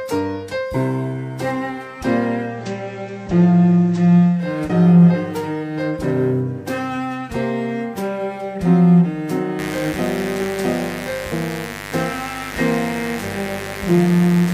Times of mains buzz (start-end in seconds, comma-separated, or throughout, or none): 9.59-14.54